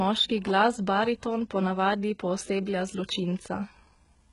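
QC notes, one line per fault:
Throughout, likely HE-AAC compression: nothing above 11.1 kHz, treble rebuilt from copied lower bands, so s sounds turn gritty and lispy. Heavy damage, fitting roughly 12 kbps.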